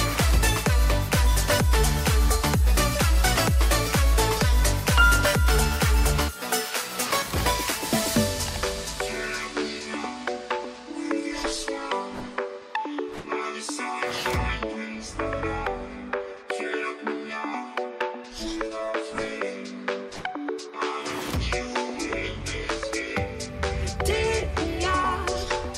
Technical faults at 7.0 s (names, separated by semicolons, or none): crude rate conversion